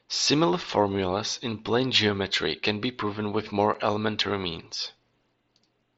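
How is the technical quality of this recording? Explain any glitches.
One brief glitch stands out, a single unconcealed Bluetooth headset packet loss. At 3.74 s, between "can be proven with" and "elementary means", about 7.5 ms of speech vanishes, which points to one lost frame on the headset link. Nothing filled the gap, so silence or an idle pattern replaced it, leaving a tiny hole with hard edges. Concealment would have smoothed it over. Because the link carries mSBC wideband audio rather than CVSD, the level doesn't dip afterward.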